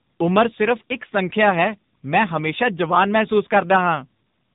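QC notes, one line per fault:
Throughout: tandem speech coding; rough, warbly, muffled speech with nothing above 3.8 kHz, like two speech coders in a row, the last fitting low-rate AMR narrowband.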